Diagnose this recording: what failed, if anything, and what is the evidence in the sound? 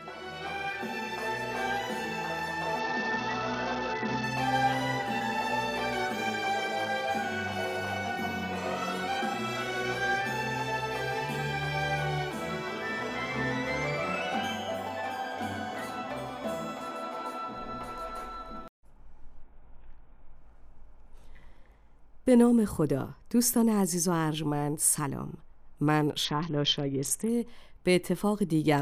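The fault sits in the codec stage on a Bluetooth link: a Bluetooth SBC bit pool drop, heard three times, from 2.80 to 4.24 s, 19.40 to 20.36 s and 26.25 to 27.29 s. In each stretch the treble goes dull and a gritty, granular noise rides on the sound, then clears. That fits the encoder cutting its bit pool from 28 to about 7, around 66 kbps, so the upper sub-bands get almost no bits and the remaining bands are quantised coarsely until the link recovers.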